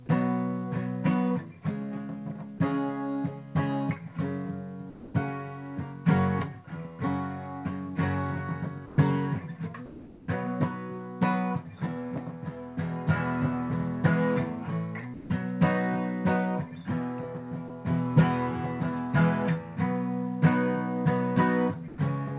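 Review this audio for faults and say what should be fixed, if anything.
Sound dropped by the voice detector: the sender's detector likely judged parts of the sound to be background and stopped transmitting, so comfort noise replaced the sound at 2.58–2.6, 4.9–5.14, 8.86–8.98, 15.14–15.3, 17.68–17.7 and 21.88–21.98 s. Each gap lasts between 20 and 240 ms before the sound returns. To prevent this, lower the detector's threshold and add a longer hangover, or turn off discontinuous transmission for this stream.

Comfort noise in place of the background: from 9.86 to 10.28 s the sender likely stopped transmitting during a pause, and the receiver filled it with synthetic noise. The real background, about 20 dB below the loudest sound, becomes a steady, featureless hiss about 2 dB quieter. All of this sits within the call path's G.711 band, with nothing above 4 kHz. To prevent this, disable discontinuous transmission, or send comfort-noise updates more often so the generated noise tracks the real background more closely.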